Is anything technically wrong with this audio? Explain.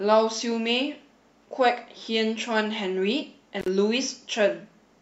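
Yes, there's an intermittent contact fault between 3.60 and 3.68 s. A loose plug or cable briefly loses connection, so the speech drops out for about 51 ms, with crackle at both edges and faint hiss filling the gap while the line's open.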